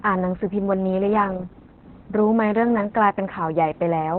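Opus voice compression runs through the whole speech clip. Nothing survives above about 4.2 kHz, so the codec has fallen back to a narrowband SILK mode. The excitation is coarsely coded. Speech sounds muffled, hoarse and slightly robotic. This fits a very low bitrate, around 8 kbps.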